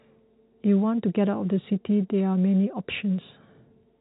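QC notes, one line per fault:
Nothing to flag here, the speech just comes down an ordinary G.711 A-law telephone path with its usual narrow band topping out around 3.9 kHz.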